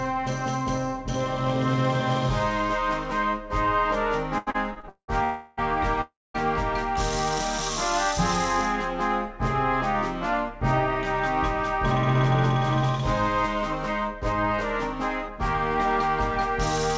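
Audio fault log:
4.38–5.10 s, repeated stalls (stutter): packets kept arriving late, so the jitter buffer emptied five times; the receiver stretched the last sound over 363 ms, longest gap 190 ms, so the audio drags and stutters.
5.24–5.59 s and 6.01–6.36 s, call audio freeze: the sound hangs as a fading continuation for 0.33 s each time, the second going silent for 0.22 s, likely packets held up and an empty jitter buffer.
13.02–14.58 s and 15.29–16.09 s, jitter buffer speed-up: an overfull buffer was trimmed, cutting about 70 ms then about 40 ms, so the audio runs at 104% then 103% speed at unchanged pitch.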